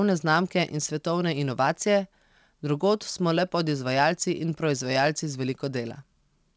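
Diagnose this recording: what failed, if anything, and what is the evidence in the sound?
Nothing failed here; the call path carries the speech normally.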